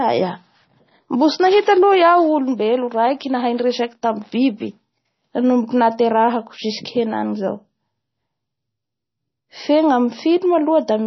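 Heavy MP3 compression runs through the whole of this speech recording, with nothing audible above about 5.9 kHz, so sibilants lose their hiss and sound dull and lisped. The remaining band has a watery, swirling quality, consonant onsets smear, and faint detail flickers in and out. On a spectrogram this shows as a hard ceiling near 5.9 kHz plus patchy, blinking fragments below it. The damage likely comes from encoding at a low bitrate, consistent with roughly 24 kbps.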